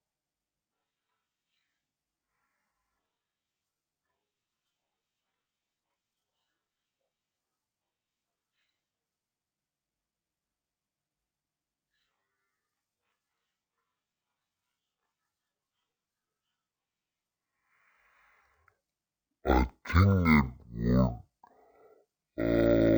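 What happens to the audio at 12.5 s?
At 12.5 s the speech is still affected by stereo read as mono, a fault that runs through the whole clip. The left and right samples, which alternate in the stream, are being read in sequence as though they were one channel. Each moment of sound therefore takes twice as many samples to get through. The speech plays at 0.5x speed and sits a full octave, 12 semitones, below its true pitch. A fainter mirrored copy also shows up in the upper half of the spectrum.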